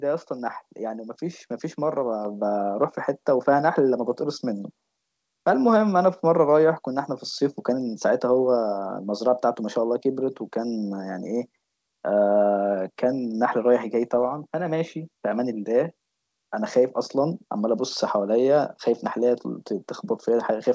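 Speech recorded through a call path whose G.722 coding leaves nothing above 8 kHz has one fault: a microphone volume step-up at 2.25 s. The level of the voice and the background jumps together by about 5 dB in a single step, which points to the call software judging the input too quiet and raising the device's input gain at once rather than ramping it. The change is abrupt.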